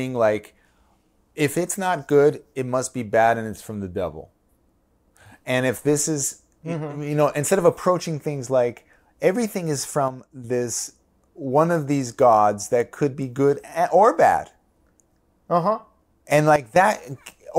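A digital gain setting was likely applied without a ramp, causing a sudden gain jump: from 10.08 to 10.44 s, just after "things like everything is", speech and background noise drop together by about 6 dB, then again by about 12 dB from 16.56 to 16.76 s.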